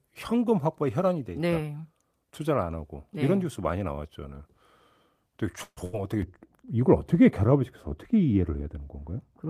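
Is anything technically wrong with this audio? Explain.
Yes. Three faults affect this speech clip, all in its second half.

At 5.63 to 5.79 s there is a call audio freeze. The last sound is stretched into a fading buzz or hiss for about 130 ms, ending in roughly 50 ms of silence. The likely cause is packets held up in transit, so the jitter buffer ran dry. When they arrive, the speech carries on where it stopped. Nothing is lost, but the rest of the audio now runs about 130 ms late.

From 5.85 to 6.02 s comes a burst of packet loss. A short run of packets never arrived in time to be played. The receiver filled about 80 ms by extending the last sound and fading it down, which gives a brief held buzz or fading hiss. The speech then resumes further on. About 80 ms of the original is simply gone, so there is a small jump.

From 6.22 s to the end, de-emphasis applied wrongly dulls the sound. 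A treble cut meant to reverse pre-emphasis was used on audio that had none, or was applied twice. The response slopes smoothly downward, reaching about 11 dB lower at 10 kHz than at 1 kHz. Sibilants and consonant detail lose their edge. The last few seconds sound muffled, as if heard through cloth.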